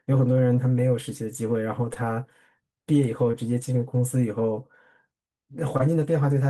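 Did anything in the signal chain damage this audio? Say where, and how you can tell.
Yes, the network stage damaged this speech with short concealed packet loss, heard as brief smears at 1.93–1.97 s, 3.31–3.35 s and 5.77–5.81 s. Each time about 20 ms of audio failed to arrive, which fits one lost 20 ms packet, and the decoder covered the hole by extending the preceding sound before cross-fading back. That continuation is the tell: a plain dropout would leave a silent gap or a hard click, while here the sound wobbles briefly and carries on.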